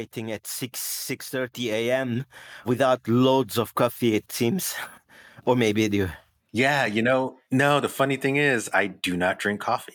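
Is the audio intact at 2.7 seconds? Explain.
No. At 2.7 seconds the clip is in the middle of an automatic gain rise running from 1.31 to 3.14 s. The gain control judged the input too quiet and lifted its level gradually, by about 6 dB, so voice and background swell together until the rise settles just before "of coffee it seems".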